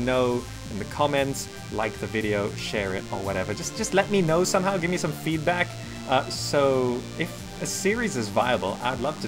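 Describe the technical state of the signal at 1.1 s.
At 1.1 s, as throughout the clip, DECT cordless phone buzz sits around 20 dB below the signal: radio bursts every 10 ms are rectified, giving a thin, harmonic-rich 100 Hz buzz, harsher and more rasping than smooth 50 or 60 Hz mains hum.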